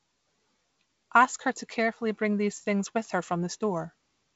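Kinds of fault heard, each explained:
No faults can be heard anywhere in this speech.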